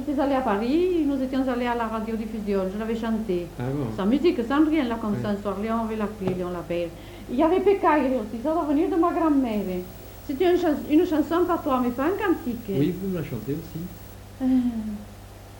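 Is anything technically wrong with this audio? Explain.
Yes. From 9.51 to 14.14 s there is video or display buzz: a screen or video cable couples into the audio, adding a 59.94 Hz field-rate buzz with hash and a 15.7 kHz line-rate whine, roughly 20 dB below the signal. A spectrogram shows harmonic stripes and a thin high line.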